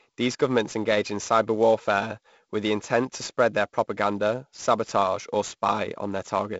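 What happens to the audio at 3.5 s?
A hiss-like roughness rides on the speech, strongest on loud, bright sounds. This is sample clock jitter, present throughout: a converter clock wandering by around 10 microseconds puts the error roughly 20 dB below the speech.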